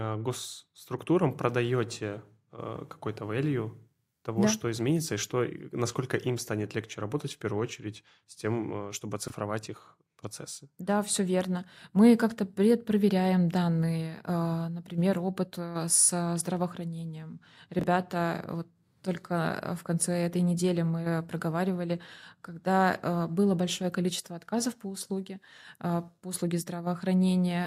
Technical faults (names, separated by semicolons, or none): chunks out of order